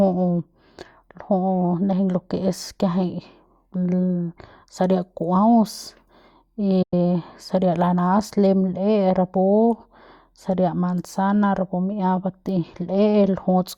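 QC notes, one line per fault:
6.82 to 6.94 s, digital broadcast dropout: the speech fades out over about 8 ms and goes silent for roughly a tenth of a second before picking up at "saria lanas lem". The receiver muted on bad frames, about three frames' worth judging by the gap, so that stretch is simply gone.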